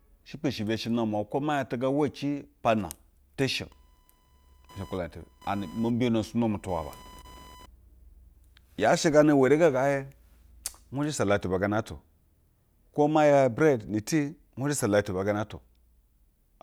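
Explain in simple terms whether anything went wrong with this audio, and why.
Something did go wrong. From 3.72 s to 7.66 s, starting right after "shi o", a buzzing whine sits underneath the speech. This is computer activity noise. When the computer's processor, graphics card or mouse suddenly draws more or less power, the electrical ground shared with the audio circuit shifts, and that shift leaks into the recording. Here it pulses roughly a thousand times a second. It is quieter than the speech, and it follows the computer's workload, not the talking.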